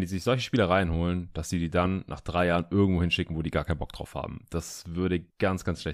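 Nothing goes wrong at any point in this speech recording, so there's no technical fault to point to.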